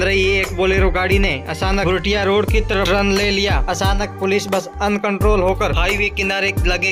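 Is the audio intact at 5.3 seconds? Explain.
No. Periodic USB or driver dropouts run from 0.24 to 6.73 s, covering 5.3 s. Every 0.25 s, something blocking the bus or driver drops roughly half a millisecond of audio and leaves silence, heard as evenly spaced ticks while sound plays.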